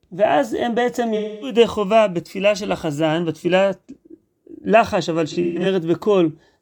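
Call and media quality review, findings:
AAC frame loss with concealment: smeary, phasey patches at 1.16–1.57 s and 5.30–5.66 s, the second broken up, longest gap about 150 ms. Decoder's papering over lost frames from the last good spectrum.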